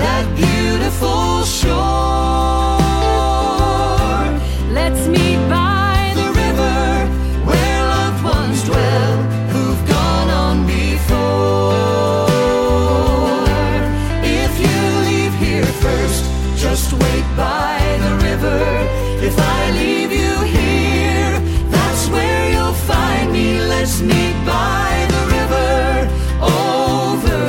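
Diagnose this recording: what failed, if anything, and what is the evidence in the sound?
Nothing in the signal chain has failed: the level stays steady, the waveform is continuous without gaps or discontinuities, and the channel stays intact throughout.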